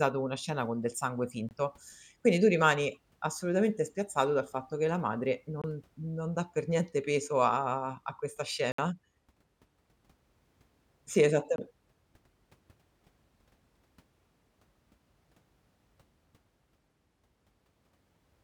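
Four short silences cut through the speech, each likely a Bluetooth dropout, where audio packets missed their delivery window and the output went silent until good data arrived. At 1.49 s, after "scena con del sangue", about 21 ms of sound vanishes. At 5.62 s, between "fatto che la madre" and "non dà per niente", another 21 ms is lost. At 8.72 s, after "peso a a questa", the gap is longer, 64 ms, which fits three consecutive lost packets. The last, at 11.56 s, is again about 21 ms, consistent with a single packet. Each hole has abrupt edges or a fade of a few milliseconds, and the speech resumes further along, as though it had kept playing through the gap.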